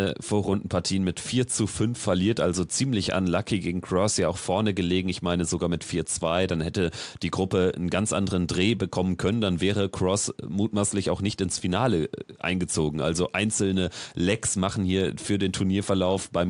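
Speech recording with no technical faults, the only background being room noise sitting about 40 dB below the speech.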